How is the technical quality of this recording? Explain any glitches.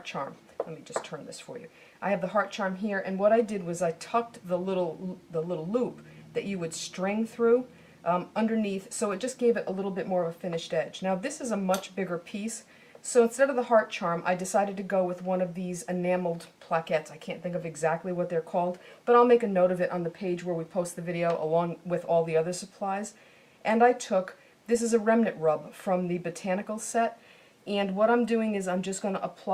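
No glitches or technical faults can be heard here.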